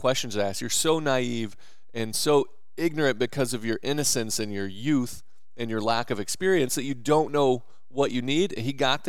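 A constant DC offset sits under this speech recording from start to finish, shifting the whole waveform off zero by about -37 dBFS. It adds nothing audible itself, but it eats into headroom and shows up as steady energy at 0 Hz.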